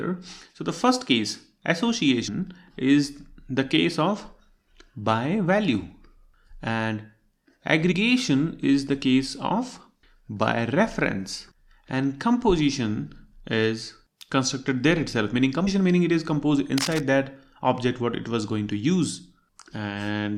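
At 2.27 s, 7.91 s, 15.66 s and 19.72 s the audio jumps forward, losing roughly 150, 70, 150 and 50 ms. These are compressed frames skipped: whole frames dropped before decoding, with jump sizes that fit a 24 ms frame. From 16.78 to 17.00 s, dense irregular scratching sits about 10 dB below the sound, likely cable scratch noise from a worn contact being moved. It is rough, rustling noise, not isolated ticks.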